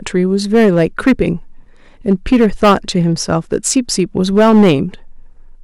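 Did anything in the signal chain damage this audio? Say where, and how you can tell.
Yes. Hard clipping runs through the whole clip: a stage ahead of the converter or a sample-format conversion was driven about 10 dB past its ceiling, so every peak beyond full scale is sliced flat. Only a few percent of samples sit over the limit, but they fall on each loud syllable, giving a gritty crackle on the speech peaks. The squared-off tops add harmonics high in the spectrum, which is where that harsh edge comes from.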